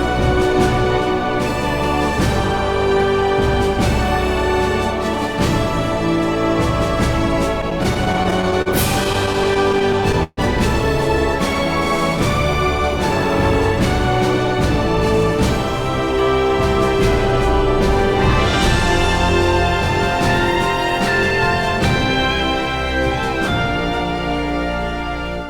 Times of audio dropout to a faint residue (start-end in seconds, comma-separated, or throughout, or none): none